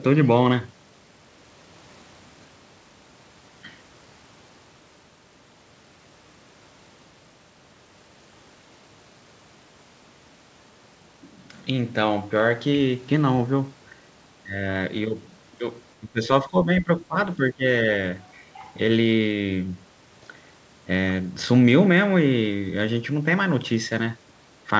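Speech suppressed in double talk occurs from 16.0 to 17.17 s and from 17.36 to 17.63 s. The speech dips by about 15 dB, then about 20 dB. The likely cause is an echo canceller that mistook the talker for loudspeaker echo while both sides spoke, and turned both down.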